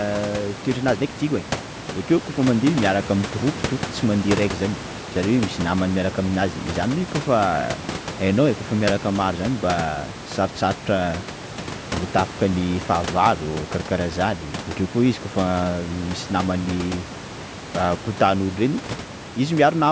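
No technical faults occur at any point in the speech, so there is nothing to place in time order.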